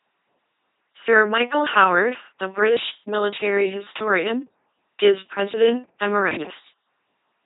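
Throughout, the speech has passed through an LPC-10 vocoder, which fits a 2.4 kbit/s rate. Each moment is forced to be wholly voiced buzz or wholly unvoiced noise through a small vocal-tract filter, so the voice sounds heavily robotic, with stray buzzes and hiss, and nothing above 3.8 kHz.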